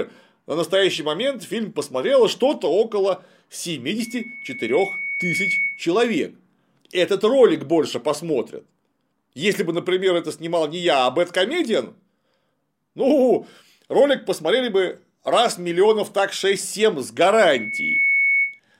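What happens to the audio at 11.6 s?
Nothing goes wrong at 11.6 s; the speech carries on intact through that moment, with no dropout, click, distortion or other fault to be heard there.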